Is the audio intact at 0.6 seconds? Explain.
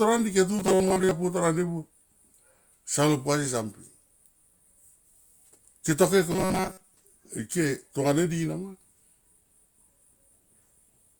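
No. From 0.59 to 1.11 s the speech has robotic sound from repeated short buffers: a rigid, metallic buzz at a fixed 188 Hz that still loosely tracks the syllables. The likely cause is new audio arriving too seldom, so a slice of about 5.3 ms is replayed to fill the gaps, with most of the real audio in that stretch skipped. Unlike a plain dropout, nothing goes silent.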